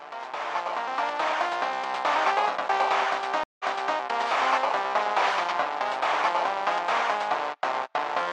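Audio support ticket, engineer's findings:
Stream reconnect, 3.44 to 3.98 s. Silence of 0.16 s. Audio resumes 0.38 s earlier, so a short stretch repeats. Probable component: streaming client. Connection broke, player reconnected and started a fresh decoder mid-stream. Server resent buffered audio from before the break.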